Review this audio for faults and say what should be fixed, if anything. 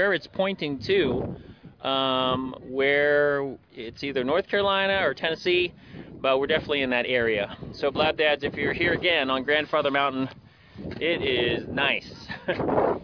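No faults detected in the recording, so there is nothing to fix.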